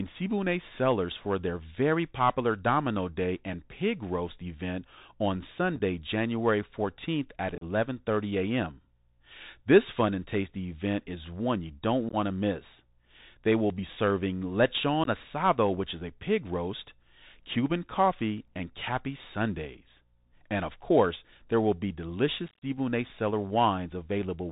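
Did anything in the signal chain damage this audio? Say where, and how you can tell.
Yes. The codec stage is the main damage. The speech carries a Bluetooth CVSD headset codec, and its artefacts are plainly audible throughout. CVSD sends one bit per sample at 64 kHz, stepping the waveform up or down with an adaptive step size. On a spectrogram, nothing appears above 4 kHz. Fast, loud high-frequency movement outruns the step size, so the s sounds come out scratchy, and a grainy hiss sits under the speech as a speckled floor.

The radio link between headset and phone shows unconcealed Bluetooth headset packet loss. Short dropouts with hard edges occur at 5.76 s, 7.55 s, 12.09 s and 15.04 s. Each lasts a few tens of milliseconds, scattered over 30 to 60 ms, with the longest gap at 7.55 s (about 34 ms). The worst stretch runs from 22.48 to 22.64 s, where about 109 ms is missing in broken runs, so it sounds like rough crackle. 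The waveform shows flat gaps with abrupt edges, and the level dips briefly after each one.

At 18.48 s a repeated buffer produces a tiny click or buzz. The driver ran out of fresh audio and replayed its last buffer three extra times. The slice is only 1.33 ms, which fits a 64-sample buffer, so the repeat is too short to hear as a stutter. Zoomed in, the waveform shows identical cycles with hard joins at each seam.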